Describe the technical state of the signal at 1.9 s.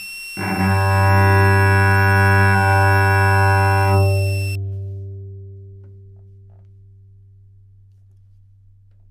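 Switching supply whistle runs from 0.00 to 4.55 s, so it is present at 1.9 s. A switching power supply is cycling in an audible burst mode, or beating against another supply, and its switching tone leaks into the signal. It sounds as a high whistle near 3 kHz, wandering between about 2.67 and 2.73 kHz, sitting roughly 15 dB below the sound.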